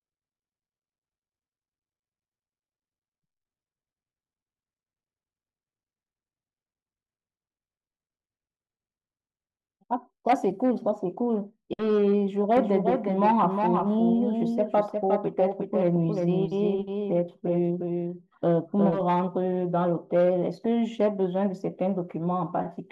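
A second, slower capture path or an out-of-step edit likely mixed the speech in twice, producing a doubled audio track from 12.57 to 19.01 s. A full-band copy trails by around 0.4 s, roughly 5 dB quieter, dry and uncoloured, switching on and off abruptly.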